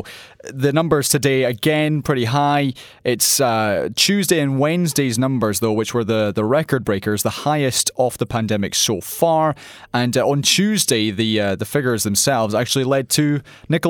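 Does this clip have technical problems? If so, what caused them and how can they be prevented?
No, I hear no technical faults in this recording.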